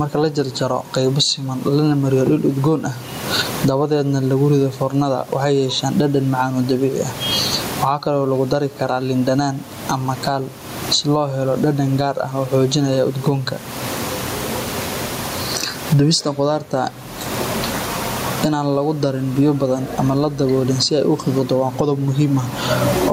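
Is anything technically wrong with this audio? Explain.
Yes, gain pumping runs through the whole clip. The gain swings by around 25 dB. The likely cause is far too much microphone gain, with a fast limiter clamping down on loud sounds. The room noise sits about 34 dB below the speech.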